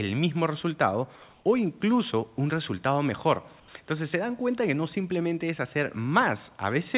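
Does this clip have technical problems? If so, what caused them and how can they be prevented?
Yes. The sender likely switched to discontinuous transmission in two short pauses, so the receiver substituted comfort noise in place of the background: at 1.30 to 1.44 s the room tone turns to flat, featureless hiss about 2 dB louder, and at 3.60 to 3.68 s to hiss about 4 dB quieter. Disabling DTX on the sending side, or giving its voice detector a longer hangover, would keep the real background continuous.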